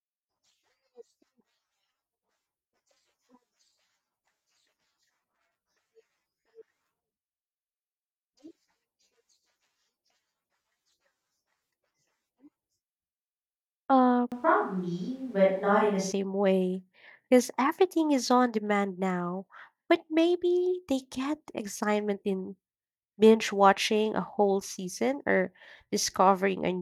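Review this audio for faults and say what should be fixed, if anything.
From 14.32 to 16.12 s the speech turns roomy and hollow, with thinner bass. The change in and out is abrupt. Loudness holds steady, and room noise sits about 35 dB below the speech. This is likely a switch to a distant microphone after the close one dropped out. To prevent it, check the close microphone's connection and record a backup track from it.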